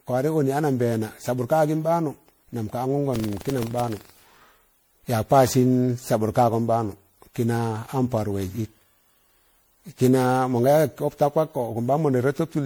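Speech runs the whole length with a swirly, hollow, smeared quality and softened consonant attacks, with no content above about 20.8 kHz. The damage is heavier than a single 96 kbit/s MP3 pass would leave. The likely cause is generation loss: repeated MP3 decoding and re-encoding, on the order of ten passes. Each pass requantised the signal on a shifted frame grid, so the noise and spectral holes compounded. From 3.12 to 4.58 s a rattling, robotic buzz at 23.4 Hz sits on the speech. It is present only while there is signal. This is buffer tearing. The writing side and the hardware read pointer of a ring buffer have drifted so that they cross inside every period, and the buzz rate fits a 2048-sample buffer. In each period a small sliver, around one to two percent, holds audio from roughly 150 ms earlier, with hard discontinuities at both edges producing the buzz.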